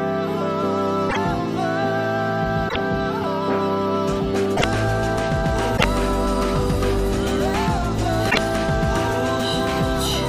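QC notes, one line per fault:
1.06–1.17 s, 2.65–2.76 s, 4.53–4.64 s, 5.74–5.85 s and 8.27–8.38 s: damaged data in a compressed stream. Five short bursts of about 0.11 s each break into the sound as brief chirps or squawks. At each point the compressed bytes are corrupted, so the decoder either misreads the affected frames into garbled output or discards them. It then loses frame sync and has to search for the next valid header before playback resumes cleanly.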